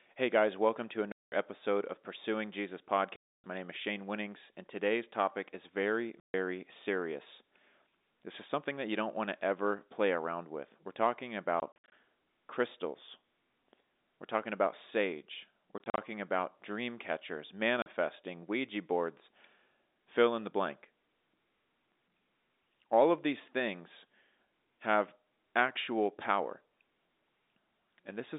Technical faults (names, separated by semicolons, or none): packet loss filled with silence